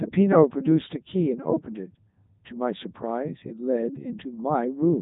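From start to finish the speech runs through a Codec 2 vocoder, with nothing above 3.8 kHz. The voice is rebuilt from sine waves at a tracked pitch rather than coded as a waveform, so it sounds robotic and buzzy instead of smeared or warbly, which fits the 3.2 kbit/s mode.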